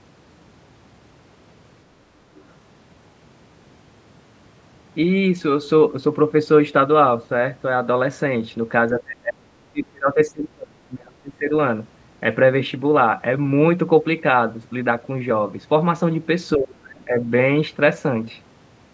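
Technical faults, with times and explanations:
2.37–2.43 s: other side's voice leaking through. The echo canceller likely left a remnant of the far-end loudspeaker signal in the microphone feed, so a brief scrap of a second voice slips in for about 60 ms, very faint, about 35 dB below the speech.
8.91–11.53 s and 16.56–17.31 s: speech suppressed in double talk. With both sides talking at once, the echo canceller likely could not separate the local talker from the echo and turned both down, so the speech dips by as much as about 35 dB, then about 25 dB.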